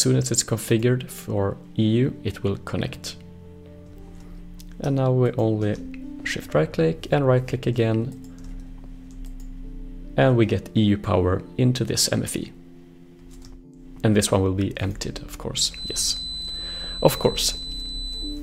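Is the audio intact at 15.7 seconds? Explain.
No. From about 15.67 s right through to the end at 18.43 s there's a feedback whistle, a thin, steady tone at 4 kHz sitting roughly 10 dB under the main sound and swelling and fading slowly in level. It's most likely a loudspeaker-to-microphone loop parked just at the edge of feedback, so that one frequency keeps ringing without ever building into a full howl.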